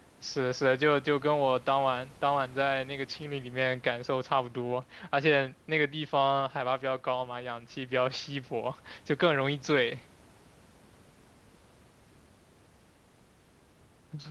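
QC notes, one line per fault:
No faults are heard in this speech clip. The call path's codec tops the audio out at around 12 kHz, and a low room noise sits about 31 dB beneath the speech.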